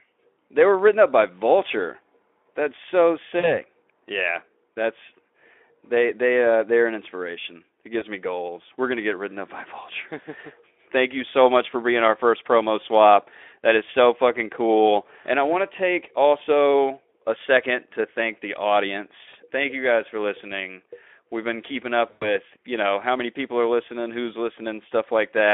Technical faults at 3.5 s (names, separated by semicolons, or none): VoIP packet loss concealed by the speech codec